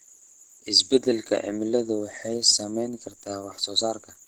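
A speech recording with plainly audible Opus compression throughout: the voice sounds hoarse and muffled, with a grainy, noise-filled texture where finer detail should be. This is likely a low-rate Opus encode in its hybrid speech mode, which fits roughly 16 kbps.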